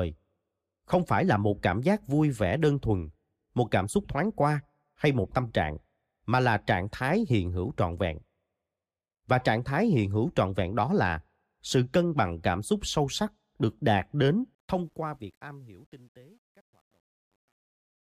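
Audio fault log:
14.55–18.01 s, truncation distortion on a fade: the fade-out over the last few seconds is smooth in shape, but the gain stage appears to round each sample to a coarse grid with no dither, consistent with roughly 10-bit resolution. As the level drops, the waveform collapses into a few square steps, so the tail turns gritty, worst from 15.57 s to the end.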